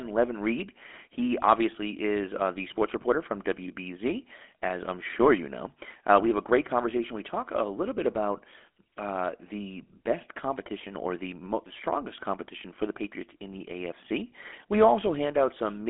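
GSM full-rate codec damage runs throughout: a vocal-tract model excited by regular pulses leaves a buzzy, gravelly roughness, confined to about 250 Hz to 3.5 kHz, consistent with 13 kbps.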